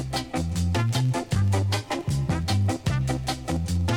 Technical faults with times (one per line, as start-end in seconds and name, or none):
1.74-2.31 drift correction step